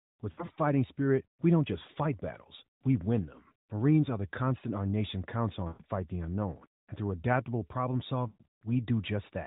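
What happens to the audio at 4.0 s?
Nothing goes wrong at 4.0 s: the speech carries on intact through that moment, with only the narrowband, telephone-like sound of the AMR mobile codec that runs through it.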